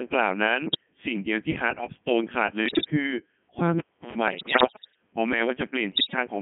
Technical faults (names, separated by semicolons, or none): Codec 2 vocoder; bit errors on digital voice radio